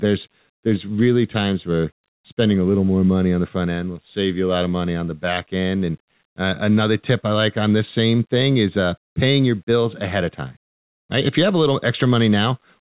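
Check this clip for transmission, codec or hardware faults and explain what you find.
No faults found; the speech carries the normal narrowband character of a call path, with nothing above 4 kHz, which fits G.711 mu-law at 64 kbps.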